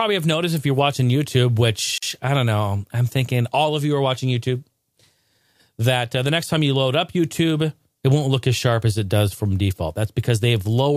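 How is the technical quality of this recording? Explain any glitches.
One glitch stands out. From 1.98 to 2.03 s, just before "I don't know I'm", a gap at a join of encoded pieces cuts the speech for 45 ms: separately encoded segments were joined with their encoder delay and end padding left in. It sounds like a brief dropout. A spectrogram shows a thin, slightly smeared vertical blank band, and a waveform shows a flat stretch.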